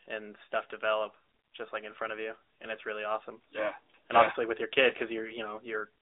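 Thin, boxed-in speech with a plainly buzzy, synthetic edge throughout, confined to roughly 300 Hz to 3.7 kHz with nothing above 3.8 kHz. This is the AMR narrowband mobile codec, whose 8 kHz vocal-tract model, at a damage level fitting a mid bitrate near 10 kbps, rebuilds speech coarsely.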